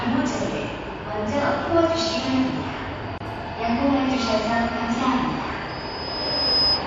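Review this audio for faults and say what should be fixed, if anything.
Throughout the audio the texture turns watery and swirly, with metallic chirps on bright, noisy sounds and smeared attacks. This is likely MP3 compression at a bitrate too low for the material. The damage level fits roughly 64 kbps. When bits run short, the encoder discards the top band at a fixed frequency and zeroes weak spectral lines, which then flicker on and off from frame to frame. To prevent it, encode at a higher bitrate or keep a lossless master for distribution.

From 3.18 to 3.20 s a gap of about 25 ms opens in otherwise continuous sound, with smeared edges, and the sound then resumes exactly where it stopped. This is a gap at a join of encoded pieces. Each section was encoded separately, so the encoder's start-up delay and the padding in its final frame were both kept when the pieces were spliced together. 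To prevent it, encode the material as one continuous stream or trim encoder delay and padding before joining, using gapless metadata.

At 5.68 s a single tone at 5 kHz appears and swells over about one second into a loudspeaker feedback squeal. It sits about 5 dB above the wanted sound and runs to the end of the audio. The microphone was picking up a loudspeaker it was feeding, and at 5 kHz the loop gain exceeded one, so that frequency built up on its own. To prevent it, reduce monitor gain, reposition the microphone or speaker, or notch 5 kHz in the monitor feed.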